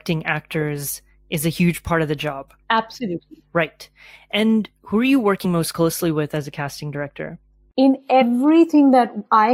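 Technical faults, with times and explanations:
5.44 s: compressed frames skipped. Between "who are you" and "most closely with", about two frames (roughly 40 ms) vanish, and the audio jumps ahead. The waveform shows a discontinuity.
6.37–8.33 s: de-emphasis applied wrongly. From "most closely with", treble slopes away, about 8 dB down at 10 kHz against 1 kHz, sounding muffled. The spectrogram's upper bands visibly darken.
8.21 s: compressed frames skipped. About two frames, roughly 40 ms, disappear, seen as a narrow vertical seam on the spectrogram.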